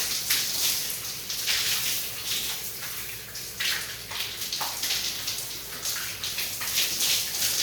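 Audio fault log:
3.92–7.62 s, block size mismatch (padded): from 3.92 s to the end, a steady buzz at about 86 Hz sits under the sound, and playback runs at 0.938 times normal speed with pitch essentially unchanged. One stage hands over shorter blocks than the next stage reads, and the remainder of each block is filled with zeros. That repeated short silence produces the buzz and stretches the timeline. The buzz rate fits a 512-sample read block at 44.1 kHz.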